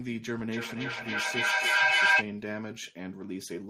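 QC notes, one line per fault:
0.49 to 2.28 s, feedback howl: a tone somewhere around 1.5 kHz swells out of the speech and climbs to about 12 dB above it, pulsing roughly every third of a second. That's a loop: a second device in the same room is picking up the loudspeaker and sending it back, and each trip around adds level, so the repeats grow and narrow down to the pitch the loop favours. The pulse rate is the loop's delay, and it stops once the loop breaks.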